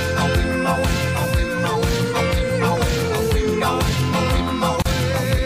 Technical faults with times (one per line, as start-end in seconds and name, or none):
4.82-4.85 gap at a join of encoded pieces